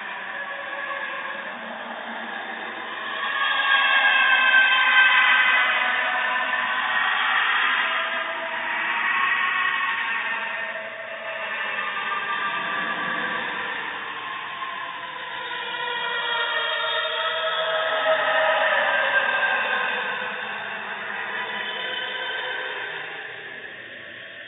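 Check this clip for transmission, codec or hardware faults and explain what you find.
Nothing to flag; no fault is audible anywhere in the audio.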